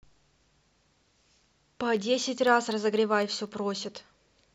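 From 1.97 s to 3.72 s the speech carries periodic USB or driver dropouts: every 0.25 s a tiny fraction of a millisecond is replaced by silence, heard as regular ticks. A spectrogram shows evenly spaced thin vertical broadband lines; the waveform shows hairline gaps.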